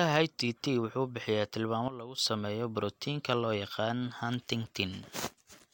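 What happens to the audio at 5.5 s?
Nothing goes wrong at 5.5 s; the speech runs through that moment without any dropout, click or other disturbance.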